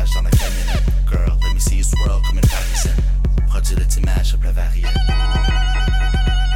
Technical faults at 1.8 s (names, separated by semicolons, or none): none